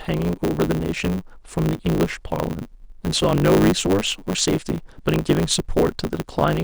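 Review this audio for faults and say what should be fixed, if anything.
Block size mismatch (truncated) runs through the whole speech clip: each block's tail is discarded, so speech plays about 1.16 times fast at near-normal pitch, with a 100 Hz buzz. Spectrograms show vertical striations every 10 ms; waveforms show matching breaks, which fits 512-sample written blocks cut short on each read. To prevent it, make each stage read exactly the block size the previous stage writes.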